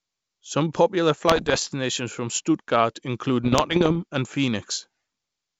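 From 1.29 to 1.69 s and again from 3.44 to 3.97 s, the speech breaks into pops and rough, gritty bursts with brief jumps in level. These are bit errors on an ADPCM link, here the G.722 wideband path. Each flipped bit throws off the decoder's step size and predictor, so the damage rings on for milliseconds instead of clicking once. Unlike packet loss, nothing drops out or repeats. The speech stays continuous but turns coarse. The rate sounds low, under one percent.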